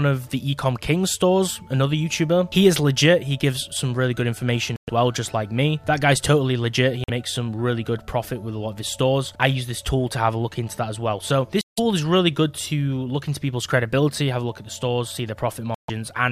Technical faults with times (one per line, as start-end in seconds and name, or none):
4.76-4.90 Bluetooth dropout
7.04-7.10 Bluetooth dropout
11.61-11.79 Bluetooth dropout
15.74-15.90 Bluetooth dropout